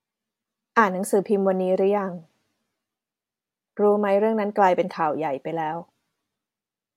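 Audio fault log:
No faults detected in speech.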